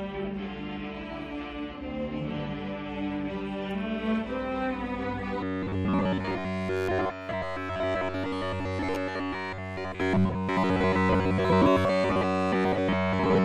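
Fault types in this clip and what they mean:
Robotic sound from repeated short buffers: From 5.41 s to the end at 13.45 s, the sound turns into a rigid, metallic buzz with a fixed pitch of 93.8 Hz. That pitch fits a repeated slice about 10.7 ms long. The likely cause is new audio arriving too seldom, so the player loops its last short buffer to fill the gaps. Most of the sound in that stretch is repeated material, and the real audio in between is skipped.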